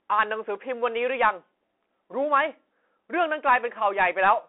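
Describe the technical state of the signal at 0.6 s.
At 0.6 s, as throughout, the speech carries Bluetooth CVSD headset codec damage: one-bit adaptive delta coding, fitting a 64 kbps link, leaves scratchy, hissy narrowband sound, and the spectrogram shows nothing above 3.8 kHz.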